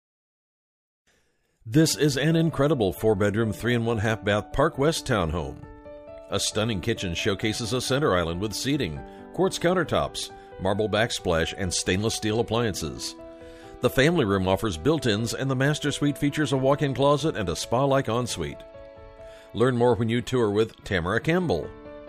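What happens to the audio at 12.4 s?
Nothing goes wrong at 12.4 s; the audio plays through that moment intact, with no dropout, click, glitch or other fault to be heard.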